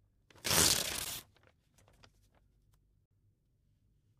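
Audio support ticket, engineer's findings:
Gap between stream segments, twice: hard-edged silent hole at 1.05 s (about 12.5 ms), another from 3.06 to 3.11 s (about 52 ms). Segment boundaries about 2 s apart leave a timestamp gap, and the player pads it with silence. Nothing's lost, just delayed.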